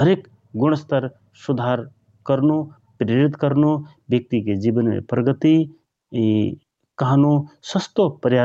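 Gain pumping runs through the whole clip. The input gain was likely set far too high, so a fast limiter clamps down on every loud syllable. The gain swings by around 5 dB under the speech, squashing the dynamics.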